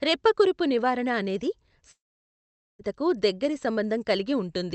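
From 1.91 to 2.82 s the speech turns into a fading buzz, then silence, before returning with that stretch gone, likely a long network dropout.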